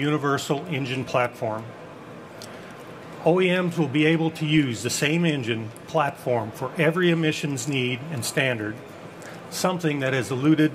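A DC step occurs at 4.57 s: the waveform's zero line jumps abruptly by an offset of about -34 dBFS, then drains away as a 20 Hz high-pass settles it back to centre. The sudden shift is heard as a brief low thump, while the sound above it continues unaffected.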